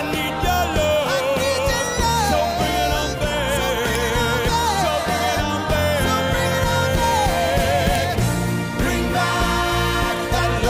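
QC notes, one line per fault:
3.95 s and 7.95 s, file header played as audio: sharp, loud click at each join between 4-second pieces, where leftover WAV header bytes play as samples.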